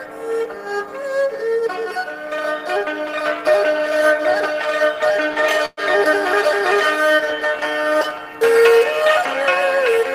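Packets were likely held up in transit until the jitter buffer ran dry, a call audio freeze at 5.65 to 5.80 s. The last sound is stretched into a fading buzz for about 118 ms, then 20 ms of silence, and the audio resumes intact but 118 ms later.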